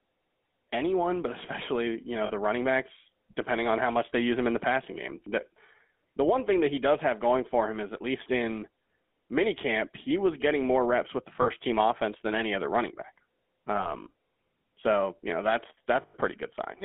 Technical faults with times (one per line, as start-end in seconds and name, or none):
0.00-16.84 GSM full-rate codec
2.26-2.32 lost GSM frames
11.42-11.49 lost GSM frames
13.76-13.94 lost GSM frames
16.02-16.15 lost GSM frames